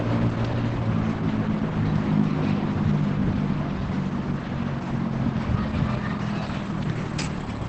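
The whole clip, start to finish, sounds muffled and hoarse, with nothing above 8.9 kHz and heavy damage throughout. That's likely Opus compression dropped into its speech-oriented SILK mode at wideband, which fits a very low rate somewhere around 12 kbps.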